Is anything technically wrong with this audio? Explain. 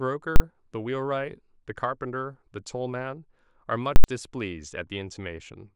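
Yes. Two very loud bangs cut through the speech, from 0.36 to 0.40 s and from 3.96 to 4.04 s. The shorter 40 ms block lands as a single crack. The 80 ms block gives a hard pop in and out with dead sound between. This is invalid numbers at full scale: a calculation produced infinite or invalid values that were pinned to the maximum level for each block.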